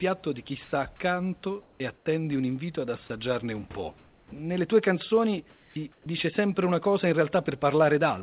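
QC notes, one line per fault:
0.64–0.72 s, 1.62–2.06 s, 3.98–4.32 s, 5.50–6.06 s: comfort noise in place of the background. After "di chi", in the gap from 1.62 s, in the gap from 3.98 s, and between "tue canzoni" and "sempre una cosa in", the room tone turns steady and featureless. The sender likely stopped transmitting in the pauses, and the receiver filled them with synthetic noise. At 0.64 s it shifts by about 1 dB. At 3.98 s it drops by about 7 dB.
1.78–1.80 s, 4.23–4.32 s, 6.04–6.06 s: onset clipped by the voice detector. Speech resumes abruptly, without its soft start. At 1.78 s and 6.04 s about 20 ms is missing. Just before "tue canzoni", about 90 ms is lost. The detector was likely slow to register that speech had restarted, and comfort noise covers the lost start.
3.08–3.10 s: sound dropped by the voice detector. For 20 ms, speech gives way to steady noise, and about 10 ms of it is lost. 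The detector likely mistook part of the speech for background and briefly stopped sending. The gap is very short.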